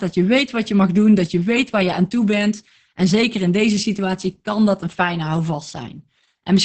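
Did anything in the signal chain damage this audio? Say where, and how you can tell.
Yes, at the codec stage: heavy Opus voice compression throughout. The speech sounds muffled, hoarse and faintly robotic, which fits SILK at about 10 kbps. It keeps only wideband content and codes the excitation coarsely, so a spectrogram shows nothing above 8.7 kHz and blurred harmonics.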